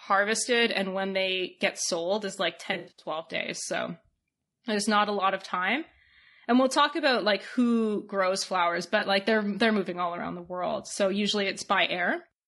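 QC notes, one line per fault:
throughout: low-delay AAC compression. The speech is rough and grainy, with noise between the harmonics and a thin, synthetic-sounding top end. That points to a low-delay AAC codec, likely AAC-ELD at around 32 kbps, where short frames blur pitch detail.
2.73–3.09 s and 8.99–9.03 s: AAC frame loss with concealment. After "get sold is like", about 220 ms drops out in bursts across 280 ms, the longest near a tenth of a second, and the decoder patches in smeared, noisy spectrum. After "like who grows flowers", a single 20 ms frame gives a brief phasey blip before "like they're".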